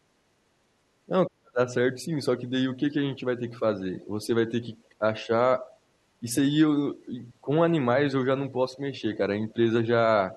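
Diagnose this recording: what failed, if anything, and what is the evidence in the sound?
Call processing failed, with speech suppressed in double talk. The speech dips from 1.06 to 5.3 s, deepest there at about 35 dB. Shorter, shallower dips follow at 5.61, 6.2, 6.95, 8.51 and 9.53 s. The echo canceller likely could not separate the near talker from the overlapping loudspeaker echo and attenuated both.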